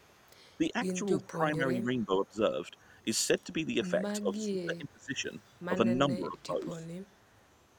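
A faint, delayed copy of the speech trails it from 0.0 to 0.57 s, roughly 35 dB below and 418 ms late. This is an echo leak, likely a far-end loudspeaker echo that the echo canceller failed to remove fully. From 0.58 to 0.99 s the voice dips slightly, a few dB, for brief moments. This is speech suppressed in double talk: with both sides talking, the canceller likely mistook the talker for echo and attenuated both. The echo returns briefly at 1.23 to 1.27 s with the same 418 ms lag. Deeper suppression follows at 1.3 to 2.41 s (about 15 dB), 3.82 to 5.31 s (about 25 dB, chopping roughly a second of speech) and 5.69 to 6.87 s (about 15 dB). From 6.93 to 7.53 s the echo leak reappears, quieter, about 40 dB down.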